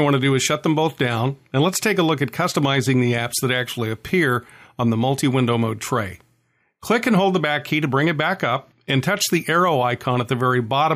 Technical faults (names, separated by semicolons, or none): none